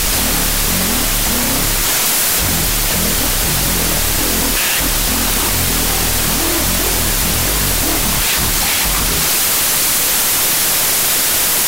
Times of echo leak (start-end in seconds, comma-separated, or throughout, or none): none